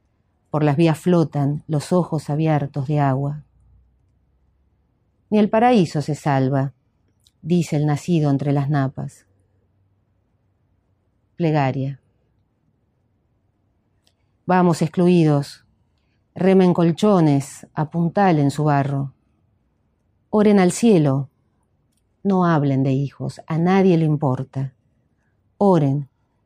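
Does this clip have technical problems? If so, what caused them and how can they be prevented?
No, no technical faults can be heard anywhere in the clip, so there is nothing here to trace back to a cause or to prevent.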